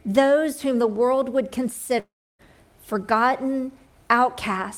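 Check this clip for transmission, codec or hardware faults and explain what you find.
There's one fault, a long network dropout from 1.99 to 2.42 s. The sound smears into a buzzy tail that fades, leaves about 0.3 s of near-silence, then picks up with roughly 0.4 s missing. That's likely the receiver papering over audio that never arrived.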